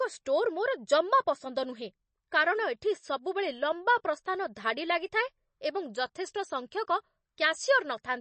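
Throughout, the speech sounds watery and swirly with nothing above 8.3 kHz, likely MP3 compression starved for bits, which fits around 32 kbps.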